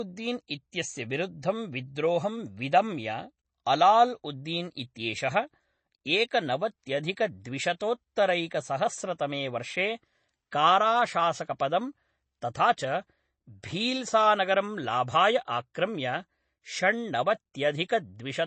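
From start to finish the speech has a hard ceiling at 8.3 kHz and a watery, swirly texture, likely MP3 compression that is plainly audible. The encoder ran short of bits, which fits something like 32 kbps, so it chopped the treble and let weak detail flicker in and out.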